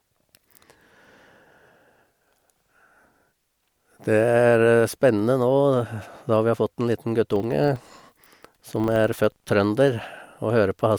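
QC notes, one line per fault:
7.36–9.51 s, filter restarted on every block: a 25 Hz buzz rides under the speech, because the filter discards its stored state at each block boundary and starts again from silence, leaving a small transient every 40 ms whose strength follows the speech level.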